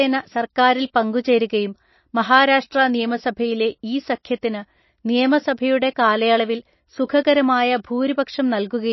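From start to finish the speech carries plainly audible damage, likely from MP3 compression at a very low bitrate, something near 27 kbps. Everything above 5.8 kHz is gone, so s sounds turn dull and lisping, while the remaining band swirls and warbles as weak frequency components flicker on and off between frames. On a spectrogram this appears as a flat ceiling at 5.8 kHz with patchy, blocky gaps beneath it, and consonant onsets look smeared in the waveform.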